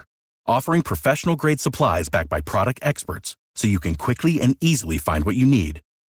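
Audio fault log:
Throughout, Opus voice compression: too few bits, fitting about 16 kbps, code the excitation coarsely, leaving speech plainly hoarse and slightly robotic.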